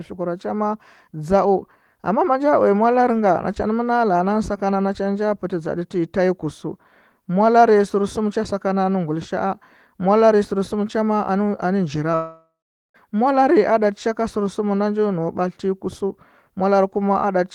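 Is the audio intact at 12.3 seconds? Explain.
No. A long network dropout runs from 12.15 to 12.96 s: about 0.8 s of speech likely never arrived, so the last sound is stretched into a fading buzz or hiss, then about 0.43 s of silence, before the audio resumes at "molare a ɗa".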